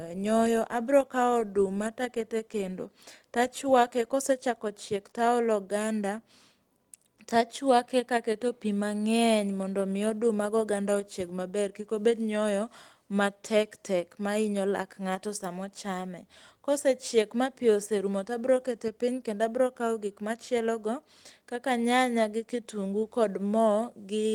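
The speech carries light Opus voice compression with the full band kept, content reaching up to about 20.2 kHz, and no technical faults can be heard.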